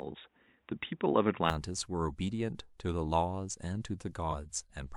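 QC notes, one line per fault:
0.00–1.50 s, input switched to a poorer device: the sound is dull and boxy for the first 1.5 s, with nothing above 3.8 kHz, then opens up abruptly at 1.50 s with no silence at the change. The likely cause is capture from a narrower-band input, such as a headset call profile, before switching to the proper microphone. The two inputs also differ in level by roughly 5 dB, and the narrow stretch carries its own faint noise floor, around 50 dB below the signal.
4.30–4.33 s, compressed frames skipped: the audio jumps forward by about 50 ms, which is roughly one 46.4 ms frame lost from the decoded stream. A small piece of the sound is simply absent.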